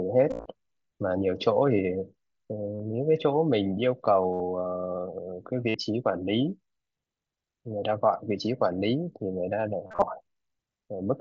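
Concealed Bluetooth headset packet loss occurs five times. Packets between headset and phone were dropped. The receiver filled each gap by repeating the best-matching recent stretch of waveform. At 0.30 to 0.46 s, 120 ms is lost across 150 ms, longest run 52.5 ms. Then 45 ms at 2.75 s, 67.5 ms at 4.33 s, and 52.5 ms at 5.69 s. At 9.87 to 10.02 s, 112.5 ms is lost across 150 ms, longest run 37.5 ms. Runs sound like a buzzy held tone, then a small warble where real audio returns. The mSBC wideband link itself carries speech up to 8 kHz.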